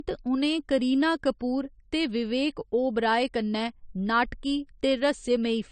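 Speech that sounds dull all the way through, with nothing above 9 kHz. The likely cause is low-bitrate audio saved at a high bitrate: its character fits a 32 kbit/s AAC encode later rewritten as 256 kbit/s MP3, which cannot restore what was removed.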